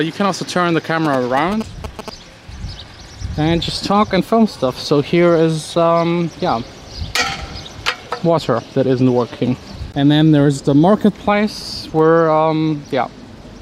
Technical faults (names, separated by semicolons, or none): GSM signalling bursts